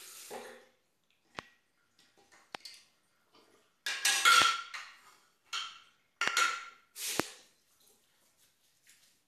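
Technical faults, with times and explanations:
1.39 to 7.22 s, loud pop: likely voltage spikes, such as static discharges or switching glitches, hit the signal path five times, at 1.39, 2.55, 4.42, 6.28 and 7.20 s. Each spike lasts about 20 ms and is heard as a single sharp pop over the sound, which carries on underneath. The first two peak about 15 dB above the sound, and the last three about 25 dB.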